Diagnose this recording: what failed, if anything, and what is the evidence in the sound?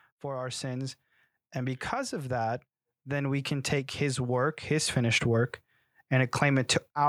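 The call processing stage is at fault, specifically automatic gain rising. From 1.54 s through 7.04 s the speech and the room noise swell together by about 9 dB. The AGC decided the input was too quiet and kept creeping its gain up, lifting everything indiscriminately.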